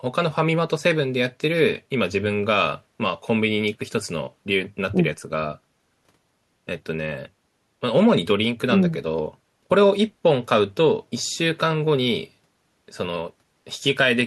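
Nothing goes wrong anywhere in this bit of speech, so there's no technical fault to point to.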